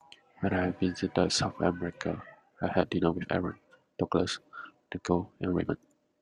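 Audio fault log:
2.12–6.22 s, time-stretched section: From 2.12 s to the end, the speech abruptly runs 1.49 times faster. Its pitch stays the same. The result sounds rushed. The likely cause is software shortening the audio by dropping short pieces to keep pitch.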